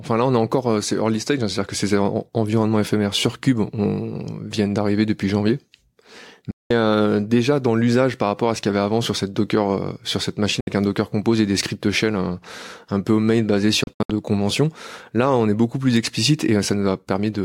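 Speech with three digital broadcast dropouts (6.51–6.71 s, 10.60–10.67 s, scattered short holes 13.84–14.10 s): lost frames muted the receiver, leaving sharp-edged blank gaps on spectrogram and waveform.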